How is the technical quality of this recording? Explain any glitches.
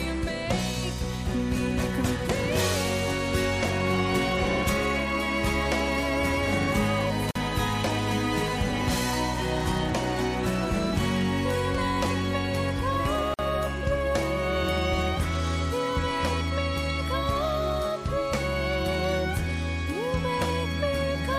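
Two short dropouts interrupt otherwise continuous sound, at 7.31 s and 13.34 s. Each is a gap at a join of encoded pieces, lasting about 45 ms and 48 ms. The recording was encoded in sections and joined untrimmed, so each encoder's start-up delay and final-frame padding left silence at the seams. The edges are smeared by the codec. Unlike a packet loss, nothing is skipped: the sound resumes exactly where it stopped.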